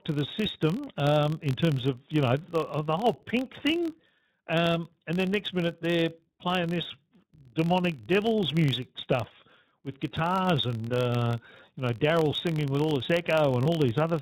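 The speech passes through the iLBC codec for the whole clip. The codec rebuilds each 20 ms frame's excitation independently and discards everything above 4 kHz, so the voice loses its sibilant air and takes on a slightly rough, synthetic edge. The damage is plainly audible, and its character fits iLBC's 15.2 kbps mode, where each short frame gets only a coarse approximation of the waveform.

Also throughout, a filter in the chain is restarted on every block. It drops its state at each block boundary and starts again from silence, so every block opens with a small transient. These repeat at 43.1 Hz, which fits a 1024-sample block, and blend into a low buzz under the voice that rises and falls with its loudness.

At 13.64 s, just after "singing with all this", a single iLBC frame is lost for about 20 ms, roughly one frame's worth. The decoder fills the hole by repeating the last pitch cycle with some noise mixed in, which sounds like a brief held, faintly buzzy vowel. 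Because each iLBC frame decodes independently, the voice is intact again by 13.67 s.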